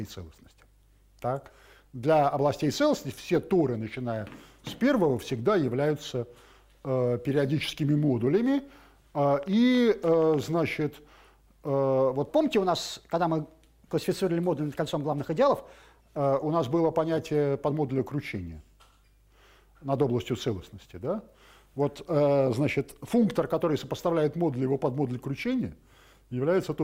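From 9.43 to 10.44 s a train of clicks ticks over the sound: about ten sharp, similar pops at an uneven pace averaging around 11 per second, each peaking at roughly the level of the audio itself. A burst of near-identical impulses with no relation to the material is likely interference from nearby equipment or a faulty connection or power supply injecting spikes into the signal.

Between 12.28 and 16.17 s a section at the wrong speed makes everything sound hurried and lifted, roughly two semitones higher, before snapping back to normal pace and pitch. That section runs 1.12 times faster than it should; speed and pitch move together, and the shift is abrupt at both edges. The likely cause is that this stretch was played or edited against the wrong clock rate.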